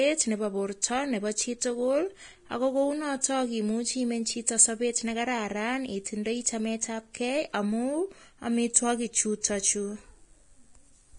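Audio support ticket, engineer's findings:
Whole clip: speech hissy and grainy, sibilants smeared into noise, consonant attacks blurred, nothing above 10.6 kHz. Likely Vorbis compression, heavily damaged. Treble residue is quantised so coarsely that detail turns into same-energy noise, which fits a low bitrate around 30 kbps.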